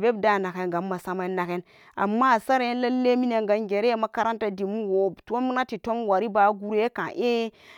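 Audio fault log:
No faults were found in this recording.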